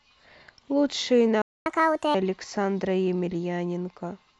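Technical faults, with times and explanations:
1.42–1.66 s, playback stall: the speech cuts to silence for about 240 ms, likely because the player ran short of data or its thread was briefly blocked.
1.66–2.15 s, catch-up at higher speed: the speech resumes resampled at 1.5 times normal speed, pitch raised roughly seven semitones, recovering lost time before returning to normal.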